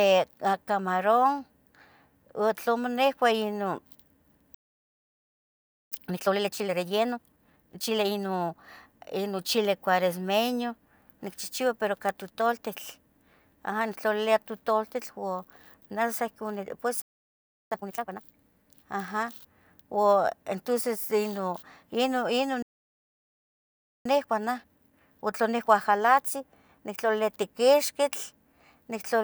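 At 4.54 s the speech halts mid-flow and the output stays silent for 1.37 s, until 5.92 s. This is a playback stall, likely the player running out of data or its thread being blocked. It recurs from 17.02 to 17.71 s (0.69 s) and from 22.62 to 24.06 s (1.43 s).

Each stall is followed by time-compressed catch-up, as the player trims its backlog by cutting out small pieces and cross-fading them. From 5.92 to 8.66 s the speech runs at 1.5 times normal speed, starting with "ino chili cueresmeño nichihchiu". From 17.71 to 18.39 s it runs at twice normal speed, and from 24.06 to 27.06 s at 1.1 times. The pitch stays normal throughout, unlike a simple speed-up.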